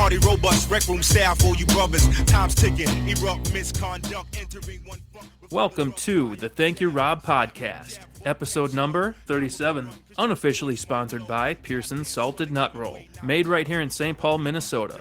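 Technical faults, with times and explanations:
Nothing stood out as a technical problem on listening to the clip.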